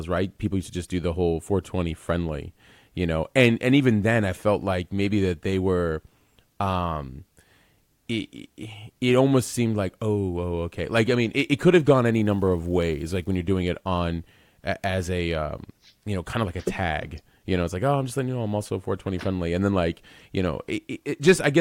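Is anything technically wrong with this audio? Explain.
Yes. From 12.13 to 13.35 s, between "it could have gone" and "you're doing it on", there is an unreliable data bit. One data line is marginal, so its bit flips in a random share of samples. Each flip adds a spike of the same size, about -40 dBFS. The result is a steady crackle or fizz laid over the speech. It persists through any pause in that stretch, because it does not depend on the signal level.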